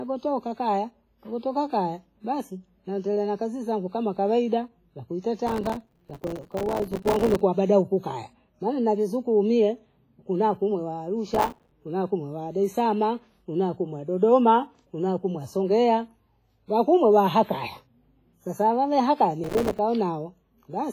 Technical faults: WMA compression; processor overload crackle

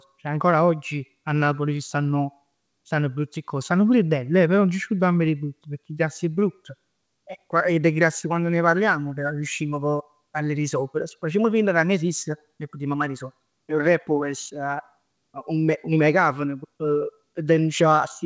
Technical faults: none

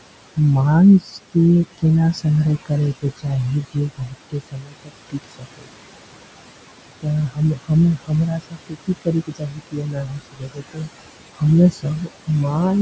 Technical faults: noise suppressor artifacts; speech cut by the noise suppressor

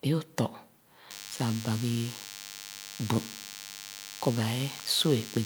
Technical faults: DECT cordless phone buzz

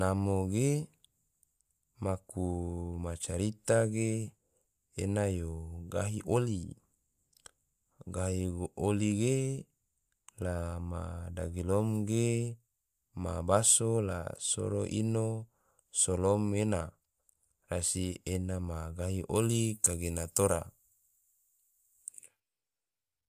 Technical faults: pre-emphasis left on

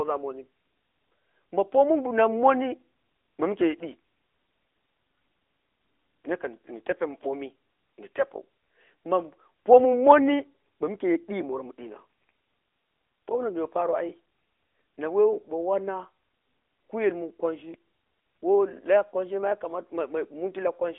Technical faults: AMR narrowband mobile codec

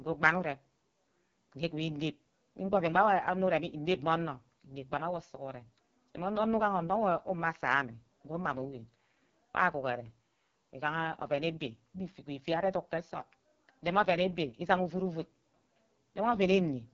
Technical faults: AMR wideband (HD Voice) codec

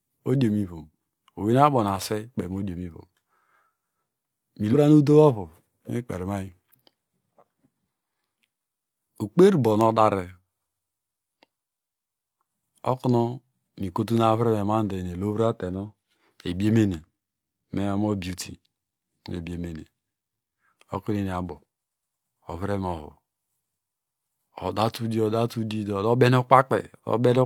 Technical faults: damaged data in a compressed stream

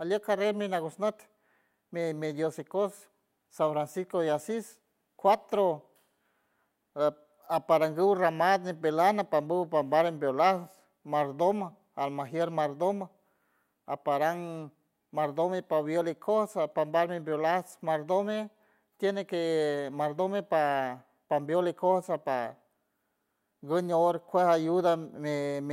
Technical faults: none

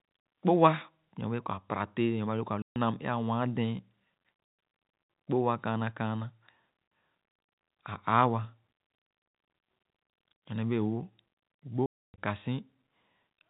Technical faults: packet loss filled with silence

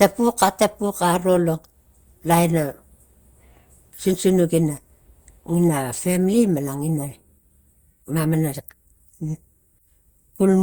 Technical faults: generation loss

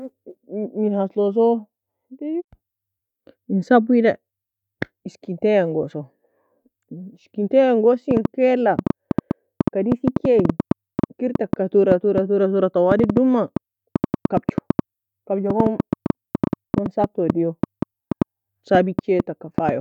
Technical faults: train of clicks

